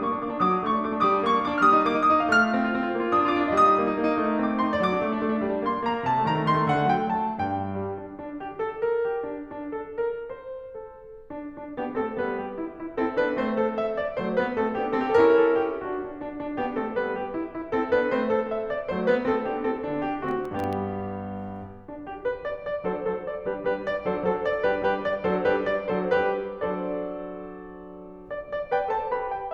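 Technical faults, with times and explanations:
20.29–20.73 s, processor overload crackle: for almost half a second the music gets a gritty tearing layered on top. The processor's falling behind, missing around ten tiny buffers, each well under a millisecond, and every miss drops a hard-edged sliver of silence into the sound.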